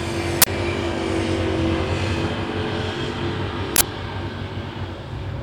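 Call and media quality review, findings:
Uninitialised buffer at 0.42–0.46 s and 3.76–3.81 s: loud burst of digital noise, 46 ms each, fits a 2048-sample block, so the playback buffer was read before being filled. Unlike a dropout, it's a noise blast, not silence.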